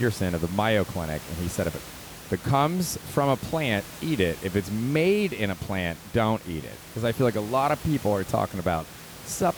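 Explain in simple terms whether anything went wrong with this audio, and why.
Nothing went wrong with this speech recording.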